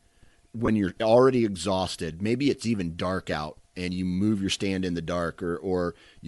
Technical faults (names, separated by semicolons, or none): Bluetooth LC3 compression; lost LE Audio frames